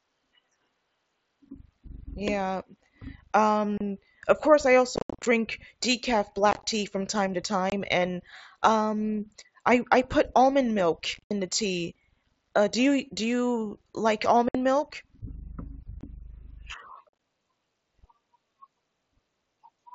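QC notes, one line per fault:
3.78 to 17.19 s, unconcealed Bluetooth headset packet loss: the speech drops out at 3.78–3.81 s, 4.96–5.26 s, 6.51–6.64 s, 7.70–7.72 s, 11.14–11.31 s, 14.49–14.55 s, 16.01–16.03 s and 17.09–17.19 s. Lost headset packets are replaced by silence instead of being concealed, so each hole has abrupt edges. Losses scattered over up to 300 ms around 5 s sound chopped and crackly. Gaps step in about 7.5 ms units, which fits mSBC packets.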